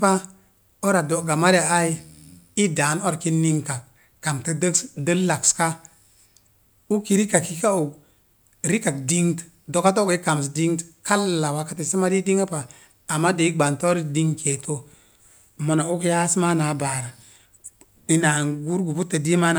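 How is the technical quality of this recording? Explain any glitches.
No glitches or technical faults can be heard anywhere.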